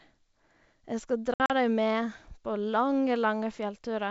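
Speech carried over what sounds like G.722 wideband coding at 64 kbit/s, clear and bandwidth-wide with at most a faint upper-band hiss, is broken between 1.34 and 1.51 s by packet loss on an ADPCM call. About 100 ms of audio drops out in hard-edged silent gaps scattered across roughly 160 ms, the longest about 60 ms, which fits around five lost packets. Because the decoder's adaptive predictor and step size lose track of the sender's, each return of speech comes back slightly distorted before it settles.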